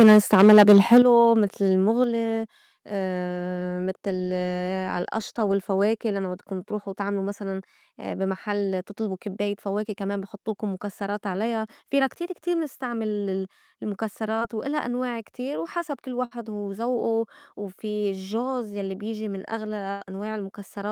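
From the opening until about 0.99 s the speech is harshly distorted, with a gritty, crackling edge on every loud syllable. This is microphone overload, most likely from an input level set too high, driving the peaks about 7 dB past the converter's ceiling so a large share of the waveform has its tops sheared flat. Unlike codec noise, the distortion follows loudness, worst on the strongest syllables and absent in quieter moments.

At 1.02 s the whole signal, voice and background alike, drops by about 9 dB in one step, then drops again by about 5 dB at 2.04 s. These are the microphone volume stepped down, likely the call software's gain control reacting to the clipping just before. What marks them apart from a speaker moving away or a natural fade is that each change is instant and the room noise falls with the voice. After the first step the harsh crackle is gone.

At 11.89 s and again at 14.39 s there are tiny smears in the speech, each where roughly 20 ms of audio failed to arrive and about 16 to 18 ms was filled by extending the preceding sound before blending back. 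This short concealed packet loss comes across as a brief wobble rather than a gap, and a consonant at that point can go missing.

Longer holes follow at 16.25 to 16.33 s and 19.91 to 20.03 s, a burst of packet loss each time. About 60 ms and then about 100 ms of audio are lost, with the receiver stretching the last sound across the gap while fading it, so a voiced sound turns into a held buzz and an unvoiced one into a dying hiss. Speech then resumes further along with the intervening material absent, which sets these apart from the brief, near-seamless smears earlier.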